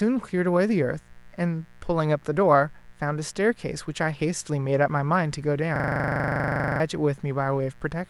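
Mains buzz runs through the whole recording. Switching spikes from a dimmer, rectifier or unshielded lead have leaked in at twice each cycle of the 60 Hz supply, producing a steady, raspy buzz rich in harmonics, sitting about 35 dB below the speech.

A system hang loop occurs from 5.76 to 6.8 s. The computer or driver stalled while the audio hardware kept replaying its ring buffer, so one 40 ms slice repeats exactly, 26 times, at 25 Hz. It sounds like a coarse, rapid buzzing stutter that replaces about a second of speech.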